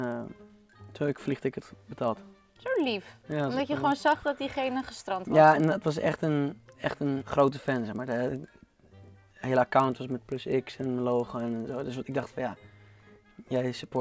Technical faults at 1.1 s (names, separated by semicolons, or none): resampler restarted on every block